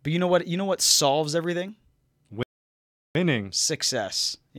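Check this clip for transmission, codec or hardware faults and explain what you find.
There's one fault in the speech here, a playback stall. At 2.43 s the sound cuts out mid-flow and stays silent for about 0.72 s, picking up again at 3.15 s. The likely cause is the player running dry of buffered data, or its thread getting blocked, so output simply halts until it recovers.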